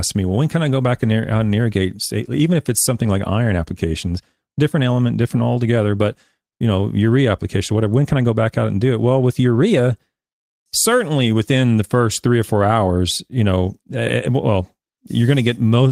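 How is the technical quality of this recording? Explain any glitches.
Two brief rough patches in this speech, both lost packets rebuilt from error correction. The first is at 2.95–2.97 s, right after "irrigate even if it's", and the second at 3.17–3.19 s, just before "iron applications different element". Each packet vanished, so the decoder played the low-bitrate backup copy carried in the next packet. That leaves no gap, just 20 ms of grainier, noisier sound.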